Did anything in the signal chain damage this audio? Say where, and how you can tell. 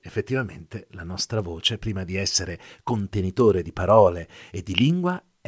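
Yes: resampler restarted on every block at the sample-rate conversion stage. Ticks at 10 Hz throughout the speech mark each 100 ms block edge in the 48 kHz to 16 kHz conversion.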